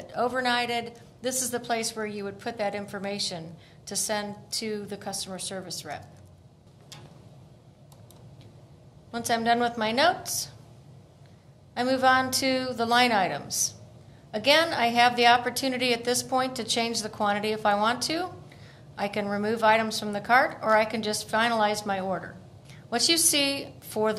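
No technical faults can be heard anywhere in the audio.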